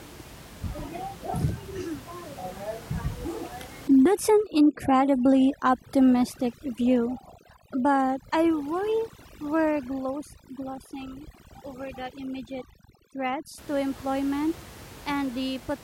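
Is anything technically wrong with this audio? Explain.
Yes. From 3.88 to 13.58 s, overdone noise removal suppresses bands near the noise estimate, leaving near-silent gaps with twinkling specks over room noise about 20 dB down.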